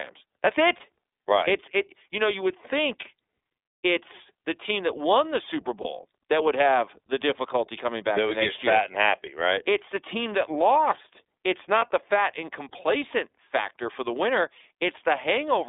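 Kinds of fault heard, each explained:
iLBC codec: The whole clip has come through the iLBC narrowband VoIP codec, coded in 30 ms frames at 13.33 kbps, which fits the 30 ms mode. The band sits roughly between 300 Hz and 3.7 kHz, so there's no air or sibilant sparkle up top, and the thin low end is plain too. The codec damage is plainly audible: speech stays clear but has that slightly rough, synthetic edge you get when each frame's excitation is coded on its own.
Lost iLBC frames: Three short dropouts, at about 0.77 s, 5.81 s and 11.79 s, each sounding like a single missing 30 ms frame. At each one the decoder covers the hole by repeating the last pitch cycle with some noise mixed in, so you hear a brief held, faintly buzzy or breathy vowel-like smear instead of a gap. Because iLBC frames don't depend on the previous one, the voice snaps straight back afterwards.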